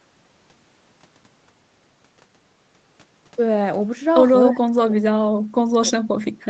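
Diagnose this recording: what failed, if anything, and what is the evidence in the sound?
Speech suppressed in double talk, from 4.49 s to the end: the speech sinks sharply, at worst by around 35 dB. This is likely the call's echo canceller, unable to separate the near talker from loudspeaker echo while both sides spoke, turning everything down.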